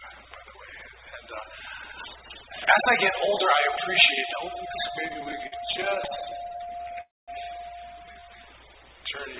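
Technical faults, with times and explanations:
5.06–6.99 s, repeated stalls (stutter): The sound halts and restarts 36 times, each halt at most 50 ms. About 0.4 s of filler is inserted, roughly a fifth of this stretch. Packets arrived too slowly, so the jitter buffer kept running dry. The receiver extended the last sound each time. Nothing is lost, but the audio drags and stutters.
7.01–7.30 s, call audio freeze: The audio stops for about 0.27 s. A short smear of the last sound decays into roughly 0.21 s of silence. It then resumes where it stopped, with nothing skipped. The likely cause is a delivery hold-up that drained the jitter buffer, so the receiver filled the wait.
8.12–8.38 s, jitter buffer slow-down: This stretch plays at about 80 percent speed with unchanged pitch. Sounds are drawn out, and about 61 ms is added. The receiver repeated single pitch periods or bits of pauses to rebuild its reserve of buffered audio. 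That is why it sounds stretched rather than lower.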